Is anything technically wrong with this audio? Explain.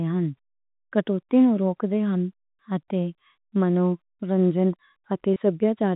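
Yes. At 5.34 to 5.36 s there is a packet loss with pitch repetition. A gap of about 20 ms went missing from the stream, which fits a single lost packet. The receiver filled it by repeating the last pitch cycle it had. Because the gap is so short, the sound briefly holds on one slightly buzzy tone instead of dropping out. Then it resumes, the narrowband telephone-coded audio carrying on at its usual 4 kHz limit.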